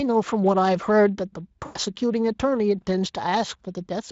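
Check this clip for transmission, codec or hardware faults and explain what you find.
There is one transmission fault, VoIP packet loss concealed by the speech codec, from 1.65 to 1.78 s. About 100 ms of audio went missing, which fits five 20 ms frames. The decoder filled the gap by extending the last pitch and filter while lowering gain, so the speech smears into a buzzy tone or coloured noise that fades. A plain dropout would be silent. The weakened, distorted sound persists briefly after the audio resumes. The Speex coding itself adds only light damage.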